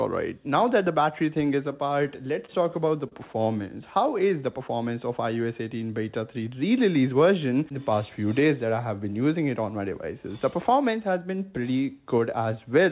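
Audio that's come through a WebRTC call path, with G.711 mu-law at 64 kbps cutting everything above 4 kHz, has two short stalls from a late packet, at 2.46 to 2.49 s and 3.08 to 3.13 s. Each time the jitter buffer ran dry and the receiver held the last sound for about 30 ms before resuming, so nothing's lost but it briefly drags.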